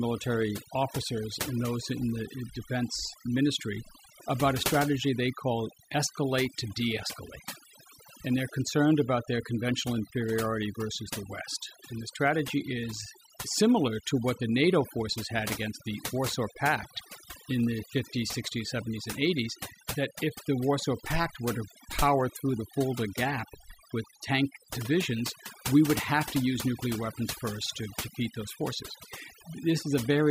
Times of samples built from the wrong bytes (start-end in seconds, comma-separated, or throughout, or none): none